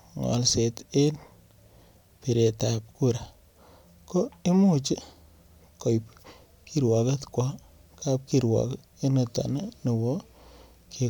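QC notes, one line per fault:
No faults heard on the speech track; nothing to log.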